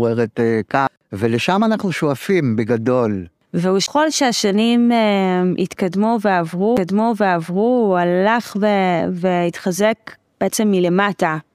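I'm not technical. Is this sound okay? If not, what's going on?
No. There are CD skips at 0.87, 3.86 and 6.77 seconds. Each time, the disc player's laser jumped to another turn of the disc, so the speech cuts out very briefly with a small tick and then resumes from a slightly different spot.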